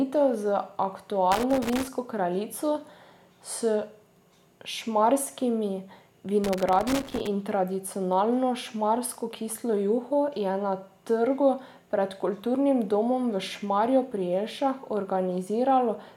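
From 1.32 to 1.88 s and again from 6.44 to 7.27 s, just before "in tradicionalno šmarsko kislo", loose connector crackle chops the speech into irregular scratchy bursts as a dirty contact makes and breaks.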